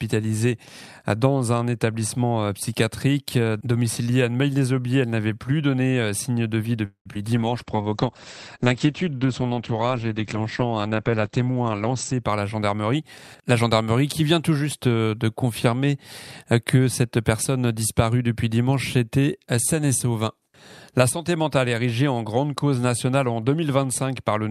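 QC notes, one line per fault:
6.85 to 7.08 s, call audio freeze: the sound stalls for about 0.2 s. The last sound is stretched into a fading buzz and then drops to near silence for about 0.11 s. Likely late packets draining the jitter buffer. Playback resumes where it stopped, so nothing is lost, just delayed.
7.12 to 7.14 s, 7.14 to 7.17 s and 7.23 to 7.26 s, short concealed packet loss: three quick smears or wobbles right after the freeze. Each one covers a 20 ms hole the decoder never got, patched by extending the previous sound before blending back in, so brief details can go missing.
7.38 to 12.29 s, call bitrate drop: the bitrate falls from 64 to 11 kbps and sits at the bottom for about 4.8 s. The audio goes rough and watery, and the top end is cut from 20 kHz down to 8 kHz, which gives that muffled, dulled sound until it recovers.
11.74 to 13.00 s, jitter buffer speed-up: playback runs at about 110% speed with the pitch unchanged. 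The buffer had too much queued, so it trimmed out roughly 150 ms in small pitch-period chunks. That's why this stretch sounds hurried and overlaps the end of the low-bitrate section.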